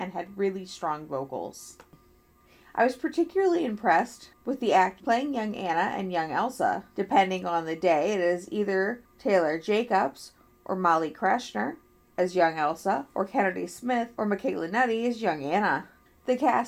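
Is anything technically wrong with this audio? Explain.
No, nothing technically wrong turns up here; it all comes through just fine.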